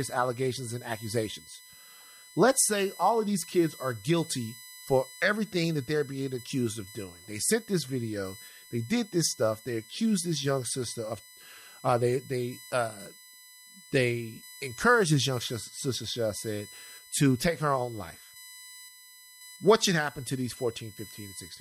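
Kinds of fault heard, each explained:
USB whine: USB bus current draw leaking through power or ground, heard throughout the speech as a fixed 1 kHz whine, strongest at 4 kHz, roughly 20 dB below the signal.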